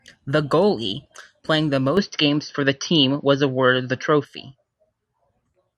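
From 1.97 s to 4.25 s the speech turns duller and boxier with no gap, most likely an input switched to a poorer device. A spectrogram shows content stopping at 6.1 kHz, a faint new noise floor appears, and the waveform shifts by roughly 5 dB.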